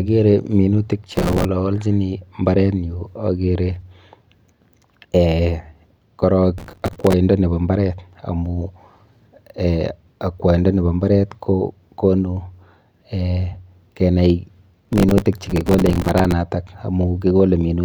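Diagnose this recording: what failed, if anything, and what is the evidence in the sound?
Processor overload crackle at the driver and buffer stage: gritty tearing at 1.12–1.45 s, 6.58–7.13 s (ending just before "nepo mbaret") and 14.85–16.32 s. Dozens of few-millisecond buffers missed their deadlines and replayed old audio. Unlike clipping, the grit follows load bursts, not loudness.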